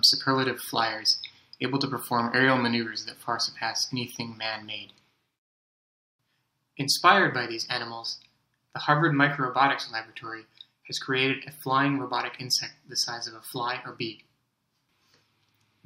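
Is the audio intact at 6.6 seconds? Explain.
Yes, at 6.6 s the audio runs continuously, with no dropout, click, glitch or other fault at that point.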